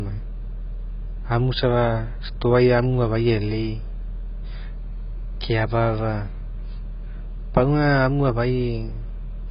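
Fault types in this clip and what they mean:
AAC compression: The whole clip is heavily damaged by what's likely low-bitrate AAC-LC coding, and the level of damage fits something around 16 kbps. An encoder that starved has to drop most of the top end, so nothing survives above about 5.2 kHz and the speech comes across dull and muffled the whole way through. The codec squeezes each frame's frequency content against a hearing model, so whatever detail it judged least audible was thrown away.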